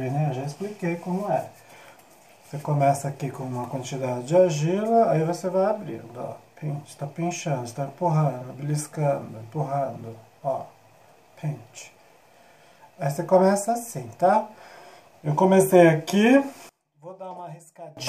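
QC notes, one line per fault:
16.69 to 17.97 s, one channel inverted. For about 1.3 s the sound drops away by about 26 dB and returns at 17.97 s. The background goes with it. This pattern likely comes from one side of a stereo source having reversed polarity. When the two sides are folded to mono, whatever they share cancels out. Only the small difference between them remains, and that leftover is what can still be heard.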